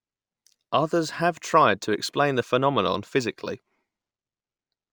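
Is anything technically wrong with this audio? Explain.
Yes. Throughout the speech there is imaging from linear upsampling: straight-line interpolation, consistent with 24 kHz to 48 kHz conversion, dulls the top and leaves faint mirrored images around 12 to 24 kHz, roughly 35 dB down, adding metallic shimmer to sibilants.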